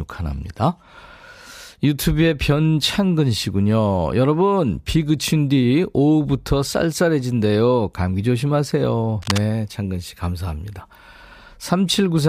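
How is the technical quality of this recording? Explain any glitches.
One glitch stands out in the recording. Cable scratch noise at 9.22 to 9.38 s: a worn cable or connector was likely moved, its contact resistance fluctuating, laying a harsh burst of rustling, not far below the speech, over the audio.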